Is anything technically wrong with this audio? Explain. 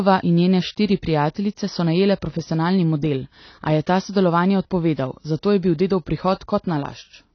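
Yes. Throughout the speech there's nothing above 6.5 kHz, with dull, smeared, fizzy detail, most likely AAC compression squeezed hard, which fits a low bitrate around 24 kbps.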